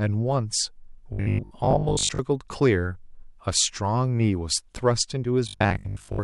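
From 1.13 to 2.19 s and again from 5.48 to 6.22 s, the speech goes to a rigid 50 Hz metallic buzz: robotic sound, likely from repeating a 20 ms buffer, with about half the audio replaced.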